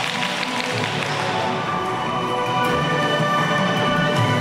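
The whole clip plays back with a wrong sample rate. Everything runs 1.5 times too fast, and pitch rises about 7 semitones with it. That fits audio recorded at 32 kHz but played at 48 kHz without conversion, so the sound is high and hurried.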